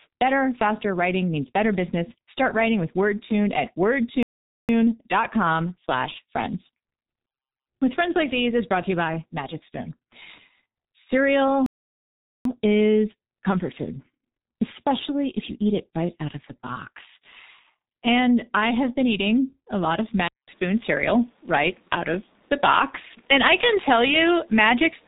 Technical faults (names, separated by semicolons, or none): G.723.1 codec; playback stall; input switched to a poorer device